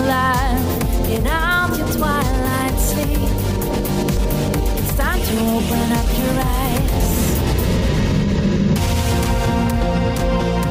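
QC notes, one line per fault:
4.17 s and 10.20 s, dropped buffer (overrun): a small forward jump in the sound, with no gap of silence. Roughly 15 ms and then about 5 ms are missing, likely because samples were overwritten before being read and the edges spliced together.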